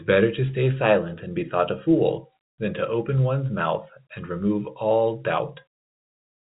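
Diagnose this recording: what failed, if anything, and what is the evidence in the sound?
Nothing failed in this recording.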